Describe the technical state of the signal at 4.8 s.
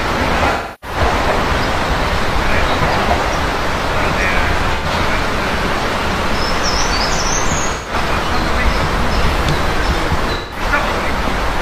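At 4.8 s there is AAC frame loss with concealment, from 4.75 to 4.86 s. About 85 ms of data is missing, which fits two lost frames. The decoder fills the gap by reusing the last good spectrum, producing a brief smeared, noisy or phasey patch.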